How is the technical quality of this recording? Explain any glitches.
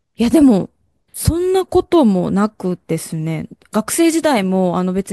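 There are no glitches to explain in this recording. Nothing interrupts or disturbs the audio at any point in the speech.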